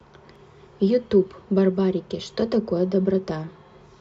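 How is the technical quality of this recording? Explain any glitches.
One glitch occurs: at 0.36 s, a block of digital silence lasting 0.27 ms, likely from a buffer left unfilled, cuts abruptly out and back, heard as a tick rather than a faded gap.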